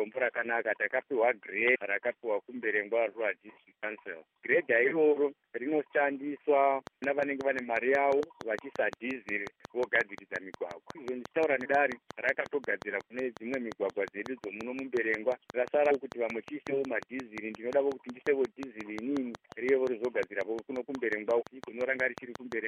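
Compressed frames skipped at 1.74 s: the decoder loses a run of whole frames, each about 26.1 ms long, so the audio leaps forward by roughly 400 ms, around fifteen frames. Because adjacent frames overlap, the seam comes out as a short smeared blip, not a sharp click, and the material in between simply never plays.

A train of clicks runs from 6.87 s to 22.53 s: a steady ticking at 5.59 clicks per second, regularly spaced, around a hundred pulses in all, peaking at about 10 dB above the audio itself. The pulses are near-identical in shape and sit on top of everything, including quieter stretches, which points to a likely cause of electrical interference from nearby equipment or a faulty connection or power supply injecting repeated spikes.

Further compressed frames skipped occur while the clicks continue: at 8.19 s about 70 ms vanishes, at 11.64 s about 200 ms, at 15.90 s about 100 ms, and at 21.41 s about 200 ms. 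Each jump spans a whole number of 26.1 ms frames, roughly three to ten of them, and each is heard as the same brief smudged blip where the audio lurches ahead.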